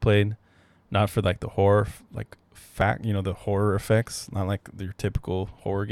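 Speech, with one overlap between stream segments at 2.81 s, between "like the horror like" and "you know the horror". Overlapping time stamps caused the player to trim genuine audio at the boundary, so a few milliseconds vanish and the waveform jumps, heard as a tiny skip.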